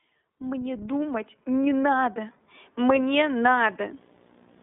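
The speech throughout carries iLBC codec damage: band-limited to about 150 Hz to 3.7 kHz, nothing above 3.8 kHz, with a rough, synthetic edge that fits 30 ms frames at 13.33 kbps. From 3.35 s to the end, video or display buzz leaks in as a 59.94 Hz field-rate buzz with hash and a 15.7 kHz line tone, well below the speech.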